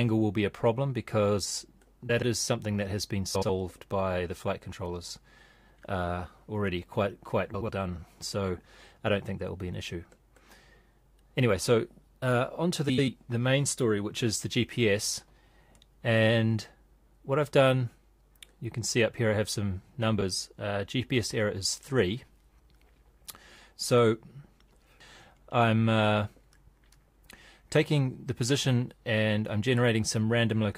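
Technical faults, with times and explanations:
2.09–2.23 s, 3.34–3.50 s, 7.54–7.69 s, 12.89–13.08 s and 20.18–20.23 s: frames out of order. In each of these short stretches, two neighbouring runs of frames were decoded in swapped order, so the sound plays its second half before its first. Nothing is lost, but the continuity is scrambled into a brief garbled flutter. On a spectrogram, harmonic tracks jump and restart with abrupt vertical edges, and the waveform shows step discontinuities at each boundary.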